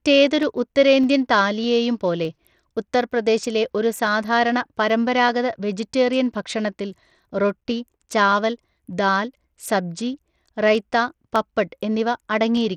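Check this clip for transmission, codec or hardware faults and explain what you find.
Two faults are present in this speech clip: codec damage across the whole recording and a regular series of clicks.

Throughout, the treble is thin and unstable, flickering in and out, with a gritty grain and some aliasing riding on the speech. This is likely Bluetooth SBC compression at a starved bit pool, around 80 kbps: the upper sub-bands receive few or no bits and the rest are coarsely quantised.

From 0.43 s to 12.57 s, a click recurs about every 0.61 s, roughly twenty times. These are likely clock drift buffer slips. The two ends run on clocks a few hundred ppm apart, so the buffer periodically drops or repeats a handful of samples, and each slip leaves a discontinuity.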